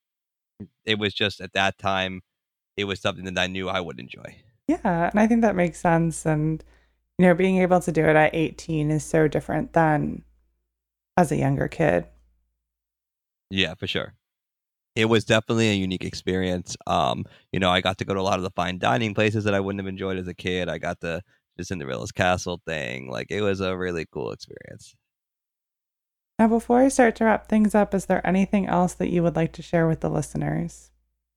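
No technical faults are audible in this speech.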